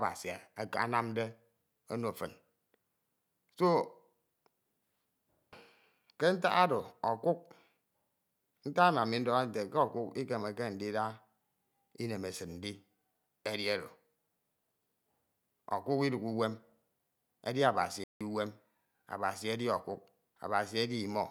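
A speech recording with a single playback stall near its end: at 18.04 s the sound cuts out abruptly in mid-flow and stays silent until 18.21 s, a gap of about 170 ms, before resuming. The likely cause is the player running short of data or having its thread blocked. On a waveform this shows as a flat line with hard edges; on a spectrogram, a clean vertical blank band across all frequencies.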